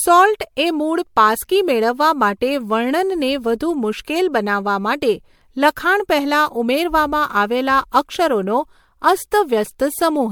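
Across the whole speech clip the audio has likely been decoded and re-encoded several times, perhaps around four passes, with a lossy codec whose character fits MP3 at about 96 kbit/s. This is generation loss. Each pass quantises again on a shifted frame grid, so the damage stacks. It sounds swirly and hollow, more smeared than a single encode at that rate would be, and consonant attacks blur, though nothing sits above 20 kHz.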